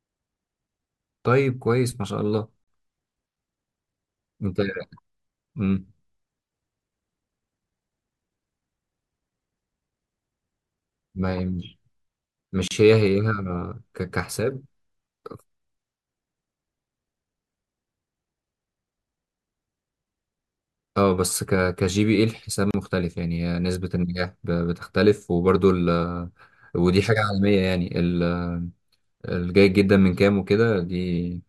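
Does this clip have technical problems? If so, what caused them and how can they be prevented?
Yes. Separately encoded pieces were joined without trimming each encoder's start delay and last-frame padding, causing a gap at a join of encoded pieces. The speech drops into silence at 2.64 s for 39 ms, and at 12.68 s and 22.71 s for 32 ms each, every 10 seconds, with smeared edges before resuming where it stopped. Prevent it by trimming the encoder delay and padding at every join, or by encoding the audio as one continuous piece.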